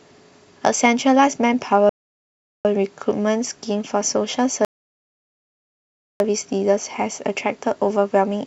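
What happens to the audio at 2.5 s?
At 2.5 s the speech is inside a rebuffering stall running from 1.89 to 2.65 s. The player ran out of downloaded audio and waited for more. The sound drops to silence, then resumes exactly where it stopped. Nothing is lost, but about 0.76 s is added.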